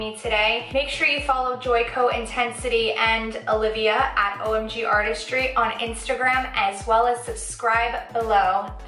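No technical faults are audible.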